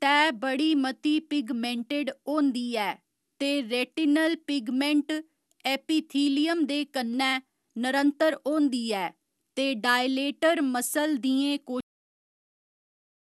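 Throughout the speech, the sound is swirly, smeared and hollow, with blurred consonant onsets and nothing above 12.6 kHz. This points to generation loss, most likely from around seven successive passes through a lossy codec such as MP2 at 128 kbit/s, each requantising on a shifted frame grid.

At 11.81 s, the audio stops abruptly mid-sound and falls straight to digital silence with no natural decay. This is a cut-off end: the final buffers were never written or played out, so the remaining sound simply vanishes.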